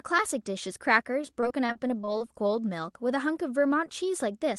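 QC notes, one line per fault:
1.21–2.51 s, repeated packet loss (robotic sound): packets kept going missing, twelve gaps in all, the longest 30 ms. Each hole was filled by extending the previous sound, so about a sixth of this stretch is patched, making the speech choppy with pieces missing.
2.33–2.70 s, jitter buffer slow-down: the receiver was low on buffered audio or had raised its target delay, and stretched what it had, repeating small pitch periods to add about 47 ms. The speech plays at roughly 89% speed with its pitch unchanged, so sounds drag out audibly.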